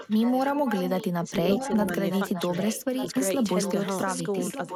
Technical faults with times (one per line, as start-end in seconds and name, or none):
0.00-1.08 echo leak
1.43-1.53 speech suppressed in double talk
1.58-4.75 echo leak